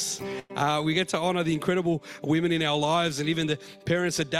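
A burst of packet loss at 0.39–0.51 s: about 100 ms is concealed by a fading, stretched copy of prior sound, showing as smeared, decaying spectrogram bands before audio resumes.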